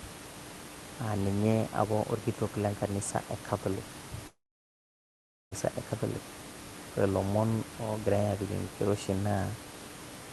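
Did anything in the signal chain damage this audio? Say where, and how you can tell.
Yes, at the network stage. From 4.27 s to 5.54 s the sound smears into a short fading buzz, then goes silent for about 1.1 s, resuming with roughly 1.2 s simply gone. That's likely a long network dropout, with concealment running dry.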